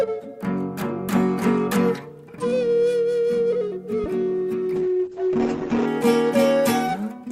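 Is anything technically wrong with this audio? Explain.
Yes, there are two faults. At 4.04 s a phantom power thump appears: a supply switching on a live input sends a step through the coupling capacitors, heard as a deep thump decaying over about 29 ms. From 4.76 to 5.93 s there is a call bitrate drop. The encoder was starved of bits for about 1.1 s, so the sound turns coarse and muffled, with bandwidth narrowing from 20 kHz to 8 kHz. That fits a fall from roughly 64 kbps to 8 kbps.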